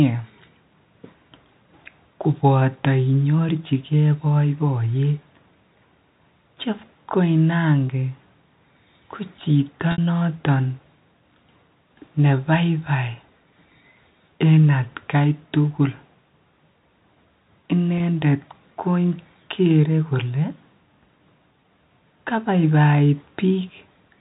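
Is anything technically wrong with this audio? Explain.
Yes. The speech has three dropouts from packet loss with pitch repetition, at 7.87 s, 9.92 to 9.98 s (just after "ko chito") and 17.98 s. Lost packets left gaps, about 20 ms, 60 ms and 20 ms long, which the receiver filled by replaying the last pitch period. The two short ones sound like a briefly held, buzzy tone. The 60 ms gap fades toward silence before speech cross-fades back. A plain dropout would be a click or hard silence instead. The G.711 telephone coding limits the band to 4 kHz throughout.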